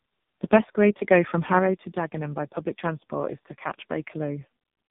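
Throughout, the speech passes through tandem speech coding: it is decoded and re-encoded at each network border, with a low-rate coder like G.723.1 feeding a second low-rate coder like AMR-NB. Errors compound, leaving the speech rough, warbly and muffled, with nothing above 3.7 kHz.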